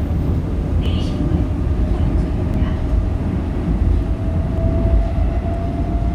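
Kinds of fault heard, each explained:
Dropped buffer (overrun): The likely cause is the recording side failing to read its samples before the hardware overwrote them, so each lost chunk vanishes and the audio on either side is spliced straight together, with no gap of silence. The result is three small forward jumps in the sound, at 0.86 s and 4.58 s, each losing roughly 10 ms, and a shorter one at 2.54 s, losing only a few milliseconds.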